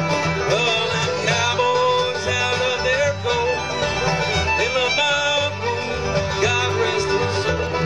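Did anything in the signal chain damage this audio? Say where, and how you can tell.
Yes. Damaged data in a compressed stream, at the codec or storage stage, causes short glitches at 1.49–1.55 s and 7.67–7.72 s, each about 50–60 ms. Corrupted bytes make the decoder misread frames and lose sync, producing brief glitches until it finds the next valid frame header.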